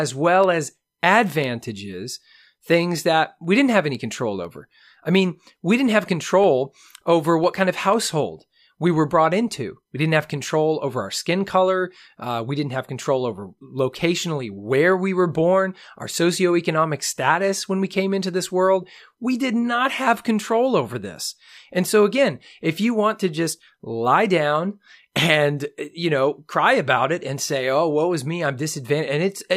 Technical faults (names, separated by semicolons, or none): periodic USB or driver dropouts